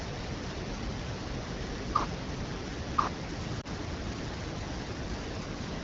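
A second, equally loud copy of the speech runs about a second behind the original for the whole clip, so every phrase is heard twice with the copies overlapping. The late copy is full-band and clean, with no reverberant tail or room colouring, which rules out an echo from a space. It is a doubled audio track, likely caused by the same signal being captured again through a slower path or by two out-of-step copies left in an edit.

Between 3.61 and 3.67 s there is a brief dip or warble in the speech, followed by a moment where the sound comes back weak before recovering. This is a lost AMR speech frame. A 20 ms gap fits a single frame failing its checksum after a radio error. The AMR-WB decoder covered the gap by reusing the last good pitch and vocal tract settings at reduced gain. Around the glitch, the HD Voice coding sounds clear with only light codec colouring.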